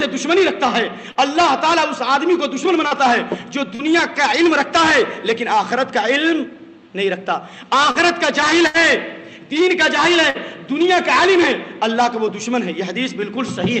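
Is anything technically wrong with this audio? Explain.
Yes. At 1.11, 2.87, 3.75, 7.91 and 10.3 s there are brief smears where the sound wobbles for roughly 70 ms before settling. Each is short concealed packet loss. About 40 ms of audio never reached the decoder in time, so the receiver invented a replacement by extending the last sound, pitched if it was voiced and shaped noise if not, then crossfaded back into the real signal. A short sound inside that window can simply disappear.

From 8.67 to 8.77 s the sound freezes into a held buzz or fading hiss, then jumps ahead. This is a burst of packet loss. About 80 ms went missing in a row, so the concealment continued the last sound for about 70 ms while turning it down. When real packets resumed, the audio picked up further on, and everything in that gap is lost. The audio's top end stops at 8 kHz, which fits an Opus call path.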